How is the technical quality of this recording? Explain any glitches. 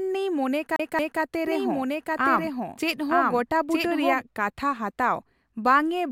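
Two separate glitches mar the recording, both early in the speech.

From 0.76 to 1.21 s the sound stutters: the same 0.23 s slice of speech plays twice more in quick, even succession, each repeat cut off by a brief mute at the jump. This is the CD stuck on one turn fault, where a scratch knocks the laser back one track at the same point on each rotation. The 0.23 s loop length sets the rapid, mechanical rhythm of the skip.

From 1.47 to 4.21 s, ending just before "ᱠᱟᱛᱷᱟ ᱦᱟᱛᱟᱣ", a second full copy of the speech runs about a second behind the first at roughly the same loudness. The two streams overlap and talk over each other. The lagging copy has no reverberant tail or room colour, and it cuts in and out abruptly at both ends. That fits a doubled audio track, likely from the audio being picked up a second time through a slower path, or from an edit that left two out-of-step copies stacked together.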